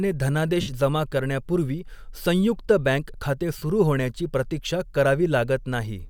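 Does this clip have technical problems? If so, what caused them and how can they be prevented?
Yes. Lost LE Audio frames break the speech at 0.61–0.68 s, just before "जमा करण्यापूर्वी संयुक्त", and at 3.57–3.62 s, before "सुरू होण्याची प्रतीक्षा". For roughly 68 ms and 45 ms the LC3 decoder repeats the last spectrum with scrambled signs, producing a noisy smear that fades. A spectrogram shows blurred, harmonic-free patches. A stronger Bluetooth link with less interference prevents it.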